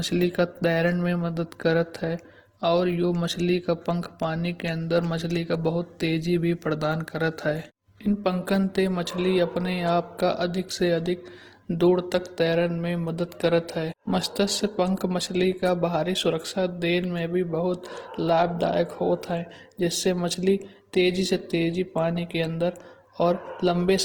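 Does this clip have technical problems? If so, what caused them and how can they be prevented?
Yes: throughout, the speech sounds rough and grainy, with tones smeared into noise despite content reaching about 20.1 kHz, likely from Opus compression in its CELT music mode at a low bitrate, which fits roughly 16 kbps. Encoding speech at a higher Opus bitrate, or letting the encoder use its speech mode, would prevent this damage.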